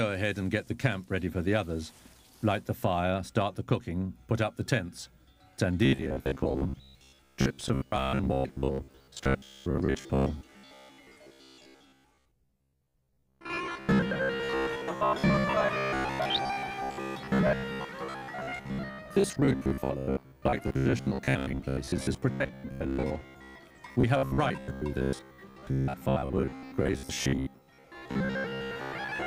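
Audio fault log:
5.85–29.27 s, robotic sound from repeated short buffers: audio likely arrived too seldom, so playback kept repeating the latest fragment for most of the span. The 66.7 Hz buzz fits a 15 ms loop, making a rigid, metallic drone.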